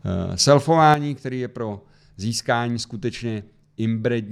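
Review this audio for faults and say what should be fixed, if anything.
At 0.94 s the level drops suddenly by about 8 dB and stays down to the end of the clip. The speech and the background noise fall together, in a single step. This is a sudden gain jump. The gain changes from one sample to the next with no fade between the two levels. The likely cause is a gain setting or bit shift applied instantly. Apply gain changes with a short ramp, or keep the gain fixed during recording.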